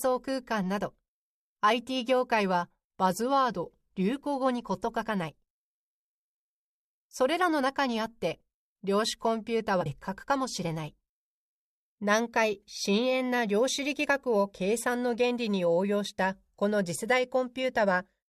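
A speech recording in which the decoder drops whole compressed frames, either missing from the file or rejected as damaged, between 9.80 and 9.86 s. The playback jumps ahead by about a tenth of a second, a span that fits a whole number of frames, so that stretch of speech simply vanishes. At the join, the speech resumes abruptly.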